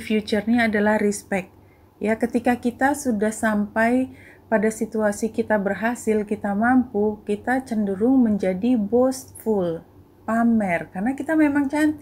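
No technical faults can be heard anywhere in the recording. Nothing in it points to a problem in the chain that carried it.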